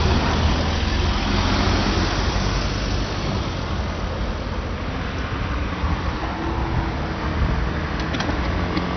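From start to finish the sound is dull, with nothing above about 6.2 kHz, and carries a gurgling, granular grit as upper bands flicker in and out. This is likely heavy MP2 compression at a low rate, around 48 kbps, starving sub-bands of bits.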